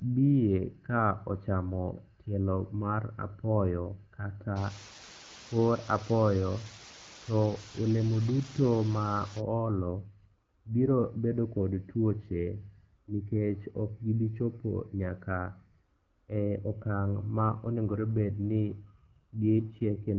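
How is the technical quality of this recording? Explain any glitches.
The recording is AMR-WB wideband telephone speech with light coding colour, interrupted by three glitches of two kinds.

Low bit depth with dither, 4.57 to 9.40 s, right after "tielo mar apoyo kata": a steady, even hiss about 15 dB below the speech. Rounding to very few bits (around 5) with dither turns quantisation error into white noise.

AMR rate drop, 9.78 to 11.04 s (ending just before "bedo kod tuoche") and 17.28 to 20.17 s: the voice turns rougher and more synthetic, with no gap or bandwidth change. This fits the network lowering the codec from 12.65 to 8.85 kbit/s to protect a weak radio link.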